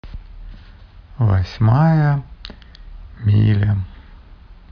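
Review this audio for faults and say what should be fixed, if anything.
Nothing stood out on listening to this speech recording, so there is nothing here that needs fixing.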